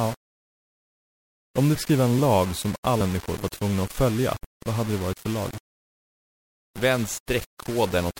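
A speech recording with two problems. Throughout, the sound is coarse and grainy, with distortion around 20 dB below the speech that rises and falls with it and disappears in the pauses. The quietest sounds turn gritty. This is likely low bit depth without dither, with the signal rounded to about 5 bits. Steady hiss would stay constant under the pauses. This error follows the speech instead. Compressed frames are also skipped twice. At 1.74 s, just before "skriva en lag som", about 70 ms of audio is missing. At 3.0 s, between "skriva en lag som" and "var tvungna att följa", about 200 ms is missing. These gaps match whole frames of about 26.1 ms. At each join there is no silent gap, and the speech jumps ahead abruptly. A simple dropout would leave silence rather than lose the content.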